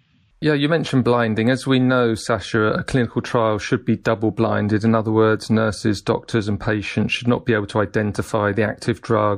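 Pre-echo appears from 4.03 to 4.05 s in this speech. The codec apparently kept a long transform block, which fits a window of about 36 ms, instead of switching to short blocks, so quantisation noise sized for a sharp attack spread about 21 ms ahead of it, rising about 11 dB as a brief hiss that blurs the onset.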